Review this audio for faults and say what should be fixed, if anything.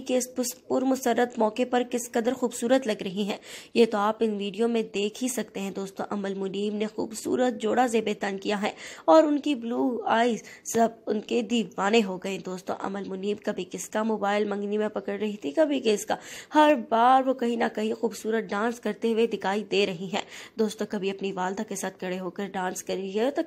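Nothing here needs fixing; I listened all the way and didn't catch anything that calls for a repair.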